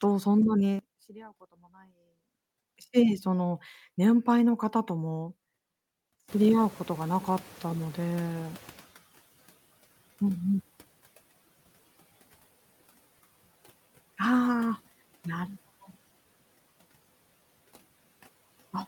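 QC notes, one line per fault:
0.79–2.68 s, sudden gain jump: level likely switched without a ramp, dropping speech and background together by about 22 dB for the whole stretch.
6.28–9.17 s, noise suppressor catching up: room noise rose around 6.5 s, estimate lagged, so noise leaks through, then sinks by about 15 dB over 2.89 s.
15.47–15.94 s, sudden gain jump: gain likely stepped abruptly with no ramp, pulling speech and background down together by about 14 dB for roughly half a second.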